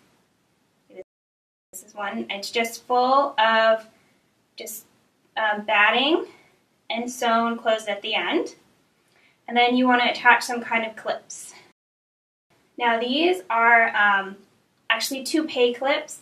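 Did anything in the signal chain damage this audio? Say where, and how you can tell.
Yes. The damage happens at playback, with two rebuffering stalls, at 1.02 to 1.73 s and at 11.72 to 12.51 s. The sound cuts to silence, then resumes exactly where it stopped. The player's buffer ran dry and waited for data, adding 0.71 s and 0.79 s.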